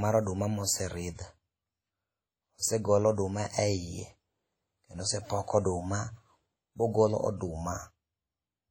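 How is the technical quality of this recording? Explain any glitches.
Heavy codec damage runs through the whole speech recording. Throughout, a ringing, washy texture with hiss that swells and fades with the voice, nothing above 19.2 kHz, and a smeared sound that fits a low bitrate around 32 kbps point to likely WMA compression. Unlike steady background noise, the hiss breathes with the signal.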